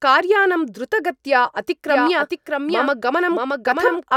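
A doubled audio track sets in abruptly at 1.89 s in this speech recording and runs to the end: a second, full-band copy of the same speech trails the original by around 0.7 s, a few decibels quieter, with no decay or room colour, so it sounds like a clean echo rather than reverberation. The likely cause is the signal being picked up again through a slower second path, or an edit leaving two out-of-step copies in the mix.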